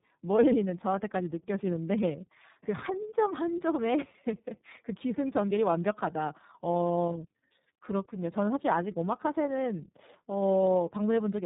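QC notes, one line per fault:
Throughout, tandem speech coding: the speech passes through two low-rate speech codecs in a row, with a plain telephone-grade link between them. The rough, smeared timbre fits a G.729A stage whose output is coded again by iLBC. The second coder models an already distorted signal, so its errors stack on the first and leave a gritty, warbly texture. Band-limiting removes everything above 3.8 kHz, which makes the speech sound muffled.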